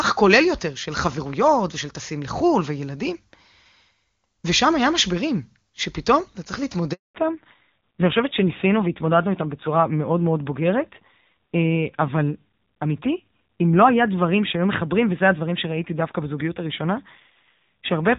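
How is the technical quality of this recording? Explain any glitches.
Two linked faults affect the last 11 s of the call, while the first 7 s carries full wideband HD Voice bandwidth.

At 6.93 s there is a handover gap. The call switched networks and no speech frames arrived, so the sound drops out for 220 ms until 7.15 s.

From 7.15 s to the end there is a fallback to narrowband. The link reverted to an older narrowband codec, removing everything above 4 kHz. The speech sounds duller and rougher, which fits a low AMR narrowband rate around 7.4 kbit/s.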